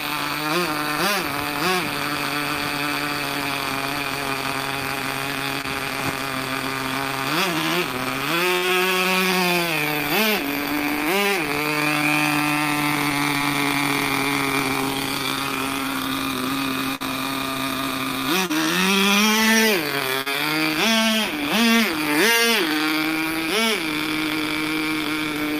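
At 5.61 s comes the first short concealed packet loss. About 20 ms of audio never reached the decoder in time. The receiver filled the gap by extending the preceding sound, then blended back in. It is heard as a brief smear or wobble. The same fault returns at 8.57 s, where about 40 ms is patched, and at 13.38 s, with a 20 ms gap. Each leaves a small wobble in the flow.

From 16.95 to 17.07 s there is a burst of packet loss. About 40 ms went missing in one stretch. The concealment held the last sound for about 50 ms and let it fade. A held buzz or thinning hiss replaces the real audio. Playback then picks up slightly further on, so a few milliseconds are simply gone.

Two more short concealed losses follow, at 18.46 s and 20.21 s. Each covers about 40 ms. Both sound like the earlier smears.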